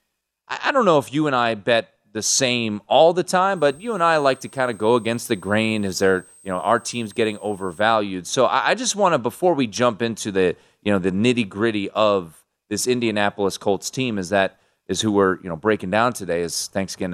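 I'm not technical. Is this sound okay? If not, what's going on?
No, not entirely. Right after "same all the time", from about 3.56 to 7.81 seconds, there's a faint high-pitched whistle sitting under the speech. That's a switching supply whistle: a power adapter or supply somewhere in the chain is humming at a pitch high enough to hear, around 8.2 to 8.4 kHz, and it wanders slightly within that range. It's quiet.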